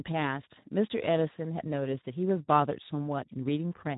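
From start to finish the speech carries Speex codec damage, plainly audible and never letting up. The low setting starves the excitation of bits, so voices come out hoarse and grainy, which fits a rate near 11 kbps. Nothing survives above 3.8 kHz. Unlike a plain low-pass filter, the damage lies inside the remaining band as rough, noisy texture, not as smooth dullness or the warbling swirls of a transform codec.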